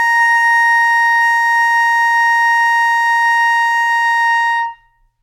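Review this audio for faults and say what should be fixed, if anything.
No faults; nothing needs fixing.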